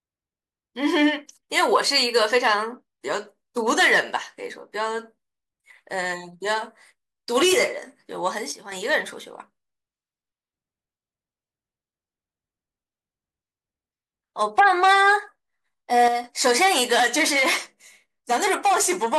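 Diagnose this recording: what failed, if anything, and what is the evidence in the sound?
Sudden gain jumps at 8.52 to 8.72 s and 16.08 to 16.24 s. The speech and background noise drop together, by about 7 dB and about 6 dB. The likely cause is a digital gain change in processing, applied without a ramp.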